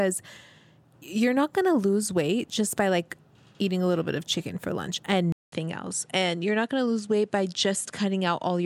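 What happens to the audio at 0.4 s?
Nothing goes wrong at 0.4 s: the speech plays through that moment intact, with no dropout, click or other fault.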